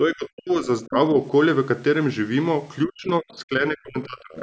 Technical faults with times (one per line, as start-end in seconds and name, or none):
0.07-0.95 speech suppressed in double talk
2.86-4.35 speech suppressed in double talk
4.36-4.42 other side's voice leaking through